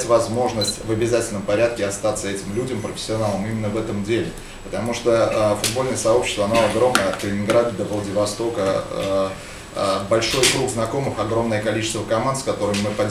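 A short, irregular burst of crackle and scratching cuts through the audio from 0.66 to 0.84 s, chopping the signal for under a fifth of a second. This is loose connector crackle: a worn or dirty contact rapidly making and breaking as it shifts.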